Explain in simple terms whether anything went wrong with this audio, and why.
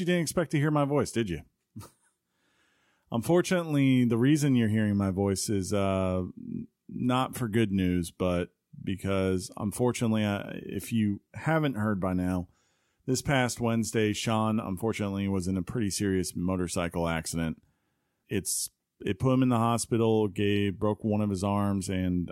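Nothing went wrong with this audio, so there's no fault to explain.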